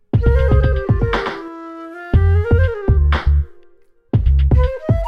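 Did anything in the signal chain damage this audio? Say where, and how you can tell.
Yes. From the start to 1.48 s there is a doubled audio track: a full-band copy trails by roughly 150 ms, about 5 dB quieter, with no decay, then stops abruptly. The likely cause is a second, slower capture path mixed in. A spectrogram would show every onset repeated at a fixed offset.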